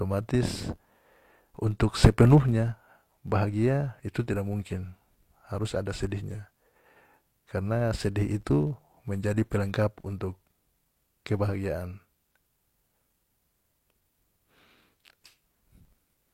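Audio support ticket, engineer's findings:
Filter restarted on every block, throughout. Buzz at 93.8 Hz following speech level; state cleared per block, fits 512-sample buffer, transient at each block start.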